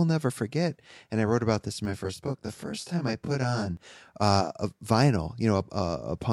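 From 1.85 to 3.77 s, channel delay causes comb filtering: one channel lags by roughly 20 ms before the mono sum, cutting fixed notches from very low frequencies upward. It sounds rough or slightly doubled without a sweeping flange or separate echo.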